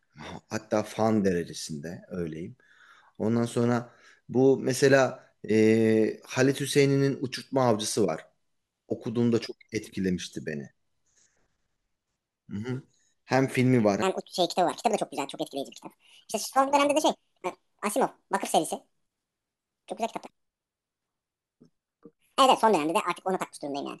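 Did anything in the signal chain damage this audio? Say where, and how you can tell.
Yes. From 14.02 s to the end, the speech suddenly turns high-pitched and hurried, running about 1.67 times too fast and rising by roughly ten semitones. This section at the wrong speed likely comes from playback or editing on a mismatched clock, which shifts speed and pitch together.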